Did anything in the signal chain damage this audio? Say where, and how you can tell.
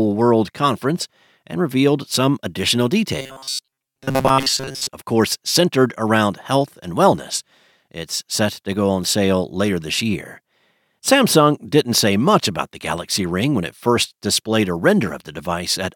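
Yes: robotic sound from repeated short buffers, 3.19 to 4.88 s, after "and revealed some additional". A rigid 134 Hz buzz, likely a starved buffer looping 7.5 ms chunks.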